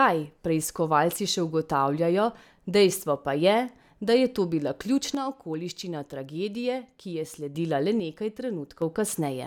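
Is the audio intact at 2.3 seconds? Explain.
Yes, the audio is intact at 2.3 seconds, with no audible fault at that moment.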